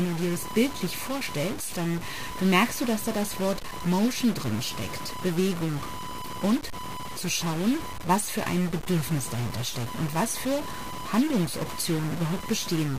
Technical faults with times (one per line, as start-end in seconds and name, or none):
0.00-12.98 computer activity noise
0.00-12.98 stuck bit